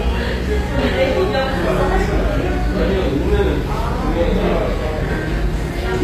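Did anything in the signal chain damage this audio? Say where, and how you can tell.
Yes, at the codec stage: throughout, the treble sounds synthetic and gritty and stops at 15.4 kHz, likely HE-AAC compression at a low bitrate around 24 kbps, rebuilding highs by replication.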